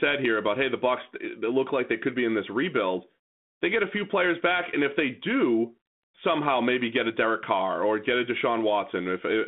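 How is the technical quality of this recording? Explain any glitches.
No glitches to report: the speech comes through a telephone band of about 150 Hz to 3.5 kHz via G.726 ADPCM at 32 kbit/s, with only the light coding texture that rate leaves.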